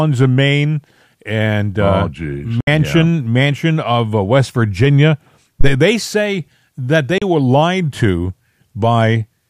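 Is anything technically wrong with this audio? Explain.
Yes, there are two kinds of fault in this speech recording.

From 2.60 to 2.68 s, and again at 7.18 to 7.22 s between "they say that" and "were lied to", the speech snaps to silence through a 3 ms fade, leaving gaps of 64 and 32 ms. This is a digital broadcast dropout: the receiver muted while corrupted frames were discarded, which fits one or two lost frames, and that audio is gone.

From 5.61 to 5.74 s, just before "they say that", a deep, brief thump decays within about 29 ms. This is a phantom power thump: a supply voltage switched on a live input, and the sudden step passed through the coupling capacitors as a low-frequency pulse.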